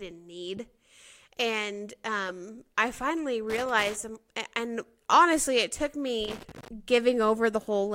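A worn or dirty contact somewhere in the cable path keeps making and breaking, chopping the speech: loose connector crackle, heard as irregular scratchy bursts from 3.50 to 3.95 s and again from 6.25 to 6.68 s.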